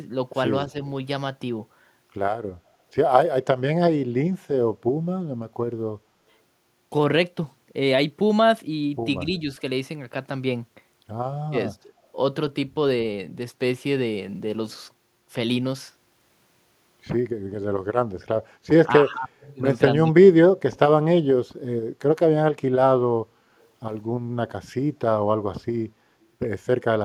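At 0.71, 11.5, 11.83, 18.88 to 19.35 and 20.06 s the speech dips by roughly 5 to 25 dB, briefly and once for nearly half a second, likely speech suppressed in double talk. Echo leak follows at 19.4 and 23.61 s: faint scraps of the voice return about 213 ms late, around 35 to 40 dB down, likely from residual loudspeaker pickup.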